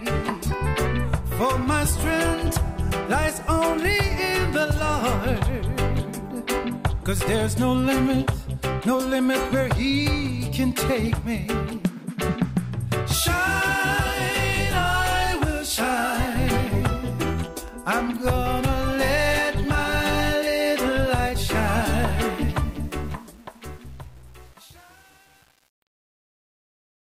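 The clip ends with a fade-out starting around 22.4 s, and from 22.38 s to the end at 27.1 s that fade shows truncation distortion. The gain stage drops the low bits without dither, so the quieter the tail gets the coarser its steps become. From 22.71 s on the sound turns gritty, which fits a stage keeping only about 7 bits. A waveform shows staircase-like square steps, and a spectrogram shows harsh broadband hash.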